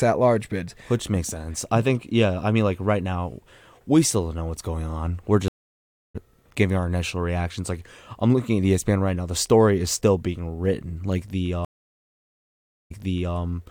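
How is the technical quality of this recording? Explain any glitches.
The speech is interrupted twice by a stream reconnect. At 5.48 to 6.16 s the connection drops. After 0.66 s of silence, a fresh decoder restarts roughly 0.4 s later, skipping audio. At 11.65 to 13.37 s, 1.26 s of silence ends with playback resuming 0.46 s earlier, repeating audio.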